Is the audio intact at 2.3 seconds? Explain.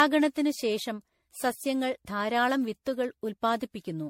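No. At 2.3 seconds the speech carries generation loss, and it's there for the whole clip, not just that moment. It has that swirly, hollow, smeared quality, with consonant attacks blurred and nothing above 16.5 kHz. The likely cause is repeated MP3 decoding and re-encoding, something like ten passes at what sounds like about 64 kbit/s. Each pass requantises on a shifted frame grid, so the noise and spectral holes pile up beyond what one encode would leave.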